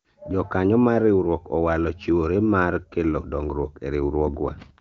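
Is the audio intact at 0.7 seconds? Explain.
Yes, the audio is intact at 0.7 seconds, with no fault at that moment.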